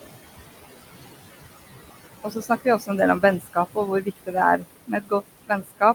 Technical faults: noise suppressor artifacts; speech cut by the noise suppressor

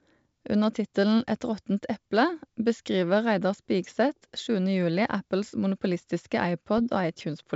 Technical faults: bit errors on an ADPCM link

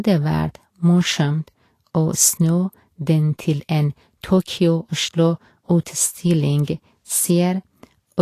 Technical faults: Vorbis compression

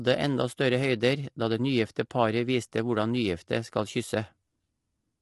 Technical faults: low-delay AAC compression

